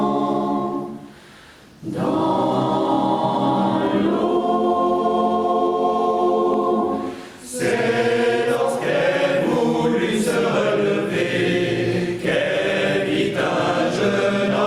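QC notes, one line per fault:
throughout gain pumping: the gain swings by around 10 dB, likely from gain set too high with a fast limiter clamping peaks. The waveform envelope looks flattened.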